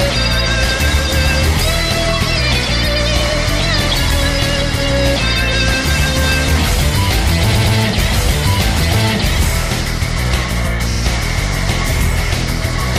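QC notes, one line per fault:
7.51 to 7.74 s, repeated frames: a 116 ms chunk plays three times in a row, adding about 232 ms, so you get a quick stutter. The block length fits a run of five compressed frames being resent.
10.91 to 11.00 s, repeated frames again: a shorter 46 ms slice plays three times, adding 93 ms, which is a tighter, flickery stutter from about two frames repeating.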